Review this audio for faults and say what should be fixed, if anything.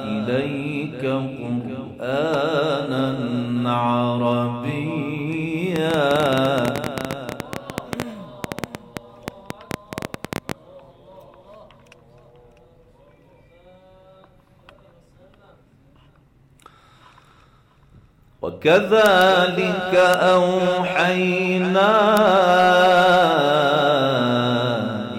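A pulse source, likely interference from nearby equipment or a faulty connection or power supply, injects a train of clicks from 5.76 to 10.52 s. The result is around fifty near-identical pops at an uneven 11.2 per second, peaking roughly 15 dB above the sound. Move interfering equipment away from cables and check the audio interface is stable before recording.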